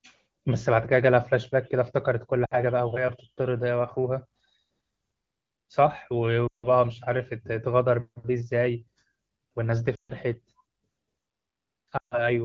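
Lost AMR speech frames occur at 2.46–2.61 s, 6.48–6.67 s, 9.95–10.12 s and 11.97–12.29 s. Radio errors corrupt speech frames, so the wideband decoder repeats the last good pitch and vocal-tract settings while lowering the gain. The first gap lasts about 60 ms, which fits three 20 ms frames, and drops the speech to near silence within two frames. The later runs of 140 to 160 ms drop the speech to near silence within two frames before it returns, briefly weak and rough.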